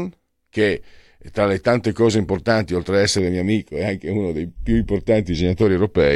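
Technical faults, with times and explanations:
3.19–5.62 s, channel delay (comb filtering): just after "cose importanti oltre ad", one channel falls behind the other by roughly 0.4 ms before they are summed to mono. Shared content cancels at evenly spaced frequencies, starting near 1.5 kHz, so the speech turns hollow and phasey.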